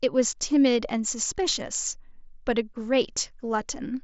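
No technical faults can be heard in the speech, which comes over a Bluetooth mSBC headset link with nothing above about 7.7 kHz.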